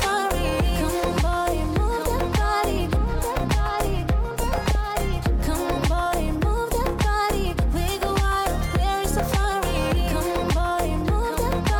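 Weak DAB reception lets bit errors slip past error correction into the MP2 data, corrupting samples, which puts short noise blips in single sub-bands, and scale factors, so individual sub-bands jump in level for up to a frame. The result is DAB burbling: a patch of burbling from 4.25 to 4.75 s, and a brief blip at 11.02 s.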